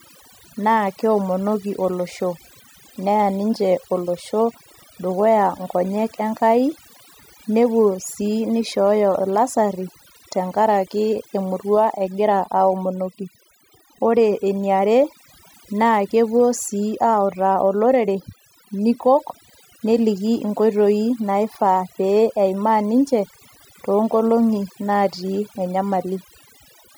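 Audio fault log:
throughout: overdone noise removal. The noise reduction was pushed too hard, so individual frequency bands near the estimated noise floor are cut deep or removed, taking the quieter parts of the speech with them. Background drops and breaks up into twinkling specks.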